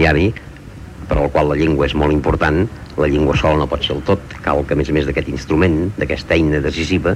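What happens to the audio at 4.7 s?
Nothing goes wrong at 4.7 s; the audio runs through that moment intact, with no audible fault.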